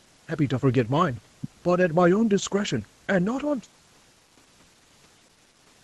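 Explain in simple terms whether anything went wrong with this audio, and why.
Nothing went wrong with this speech; it simply passed through an ordinary call, which is why nothing above 8 kHz comes through, and that is normal rather than a fault.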